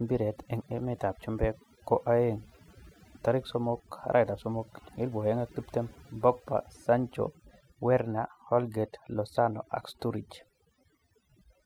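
From start to end, the speech carries overdone noise removal. A noise reduction stage was pushed too hard. It compares each frequency band against its estimate of the noise and cuts any band that comes close. Softer parts of the voice sit near that level, so they vanish along with the noise. The pauses drop in level, dotted with twinkling specks where isolated bands flicker on and off.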